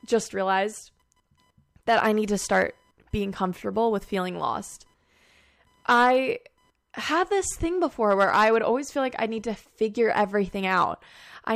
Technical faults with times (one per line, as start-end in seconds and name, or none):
0.00-11.56 computer activity noise